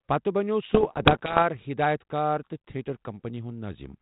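From 0.69 to 1.43 s, just after "پتہٕ بنٛٮ۪وٚو", the speech breaks into pops and rough, crackling bursts with brief jumps in level. These are bit errors on an ADPCM link. Roughly one bit in a hundred is flipped. Each flipped bit throws off the decoder's step size and prediction, so the damage rings on for a few milliseconds. The underlying channel is band-limited below 4 kHz, which fits 32 kbit/s G.726.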